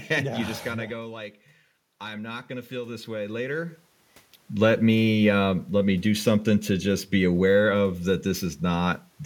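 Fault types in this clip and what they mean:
Automatic gain rising: after the input dropped by about 11 dB, the gain control slowly added about 8 dB between 1.99 and 3.84 s, so the speech and the room noise swell together. A talker moving closer would raise only the voice, not the background.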